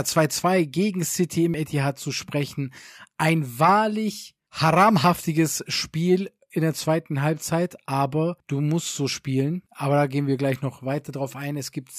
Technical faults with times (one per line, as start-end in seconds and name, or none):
1.54 dropped buffer (overrun)
5.04 dropped buffer (overrun)